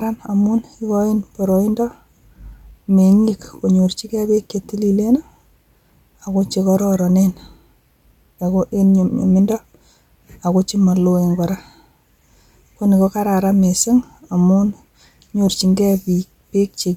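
Speech recording with no audible technical faults anywhere in the clip.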